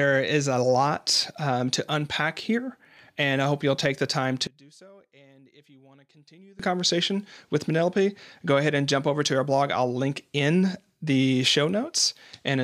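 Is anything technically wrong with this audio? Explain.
Yes. From 4.47 to 6.59 s the speech collapses to a faint trace, dropping by about 29 dB before returning at full strength. The most likely cause is one channel inverted: one stereo channel has its polarity flipped, so when the two are summed to mono everything common to both cancels. Centred speech and low frequencies nearly disappear, leaving only the small difference between the channels.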